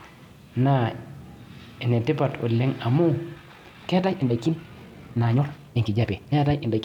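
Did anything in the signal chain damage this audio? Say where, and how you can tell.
Yes. From 3.33 s to the end of the clip the speech suddenly races ahead at roughly 1.85 times its earlier pace, yet the pitch of the voice does not rise. That sped-up stretch sounds rushed. This is a time-stretched section, likely introduced at the editing or storage stage, where software compressed the audio to fit a shorter length by discarding short slices and splicing the remainder, preserving pitch while altering pace.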